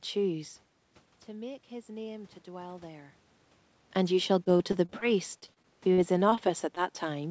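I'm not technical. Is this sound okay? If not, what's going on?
No. Between about 1.27 and 3.26 seconds, the voice and the background noise slowly swell louder together. That's automatic gain rising: the call's volume control decided the sound was too quiet and turned everything up gradually over about two seconds.

From 4.44 to 5.04 seconds and again from 5.40 to 6.39 seconds, the speech turns choppy and robotic, with small bits missing. This is repeated packet loss. Pieces of the call kept arriving late or not at all, and the receiver patched each hole by stretching the last sound.

At about 6.75 to 6.78 seconds there's a tiny smear or wobble. That's a short concealed packet loss: a sliver of audio went missing and was quietly filled in, blending back almost at once.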